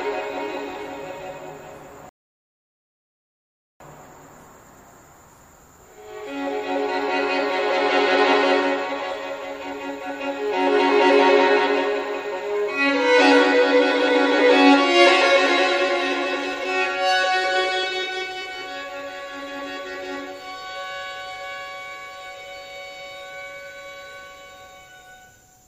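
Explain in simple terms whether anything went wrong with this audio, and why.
At 2.09 s the sound drops to silence and picks up again at 3.80 s exactly where it left off. That's a rebuffering stall: the player ran out of downloaded audio and waited for more, adding about 1.7 s of dead air without losing anything.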